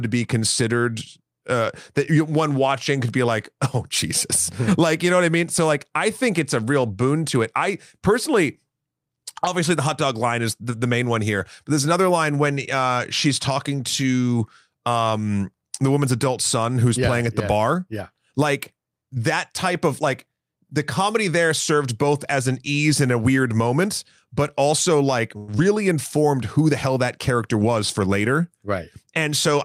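Speech, with three call-path faults packed into its last few seconds. Just after "moment but also like", from 25.37 to 25.50 s, the sound stalls for about 106 ms: the last sound is drawn out as a fading buzz or hiss, and then the speech resumes exactly where it left off. That pattern is a call audio freeze, most likely from delayed packets draining the jitter buffer. It adds a pause rather than removing anything, and that sets it apart from a loss. Straight after, at 25.58 to 25.60 s and still before "informed who the hell", comes a short concealed packet loss. About 40 ms of real audio is gone, and only a brief smear or wobble marks where the decoder bridged it by extending the preceding sound and blending back in. Here something is missing and no time is added, the reverse of the freeze. From 27.54 to 28.52 s, after "the hell that character", the speech runs at about 106% speed with no change in pitch. 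This is a jitter buffer speed-up: the receiver trims pitch-period slices, roughly 70 ms in total, to shed excess delay. Because the pitch stays the same, it is heard as slightly hurried delivery rather than a chipmunk-like resampling shift.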